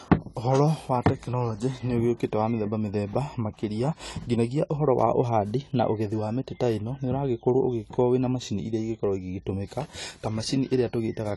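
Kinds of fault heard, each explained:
AAC compression, throughout: likely low-bitrate AAC-LC coding, cutting everything above 11.5 kHz and leaving plainly audible dull, smeared speech, which fits about 32 kbps.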